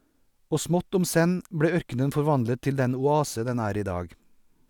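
No technical faults are audible.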